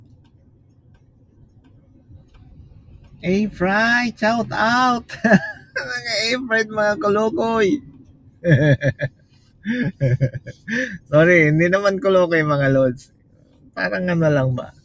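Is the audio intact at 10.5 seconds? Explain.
No. A noise suppressor designed for speech stayed active on this material, and it treats steady tones, ambience and decaying tails as noise to be pulled down. Across the clip, that gain riding swings the level by around 20 dB, so sustained parts sink while onsets pass through, giving a pumping, fluttering, thinned-out character.

At 10.5 s the problem is worse, because this is a sound cut by the noise suppressor. From 10.36 to 10.69 s the suppressor misjudged what was playing as noise and clamped down harder than elsewhere, reaching about 15 dB of reduction at its deepest. For roughly a third of a second the sound drops away and its sustain or decay is cut short, leaving an audible dip where the level should have held.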